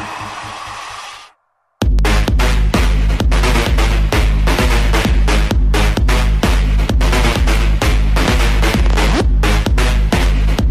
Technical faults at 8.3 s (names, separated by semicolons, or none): loud pop